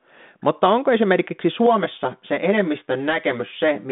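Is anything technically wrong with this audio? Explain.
Yes. Channel delay (comb filtering) runs from 1.66 s, just after "onko esimerkiksi", to the end. One channel lags by roughly 10 ms before the mono sum, cancelling evenly spaced frequencies from around 50 Hz upward, so the speech turns hollow and phasey.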